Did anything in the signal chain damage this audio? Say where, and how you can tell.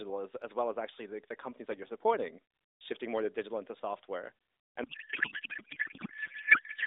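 Yes, at the codec stage there's a codec payload misread. Right after "to digital into software", at 4.84 s, the speech turns into garbled noise and warble that barely tracks it, and that lasts to the end of the clip. The AMR frames are still arriving and decoding, but the receiver is pulling the fields from the wrong bit positions. That fits octet-aligned AMR being unpacked as bandwidth-efficient, against the narrowband AMR sound heard before it.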